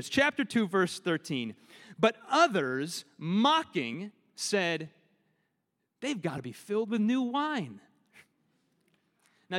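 At 3.93 s and again around 6.36 to 6.38 s, compressed frames get skipped, roughly one 23.2 ms frame each time, so the speech jumps ahead by about 20 ms.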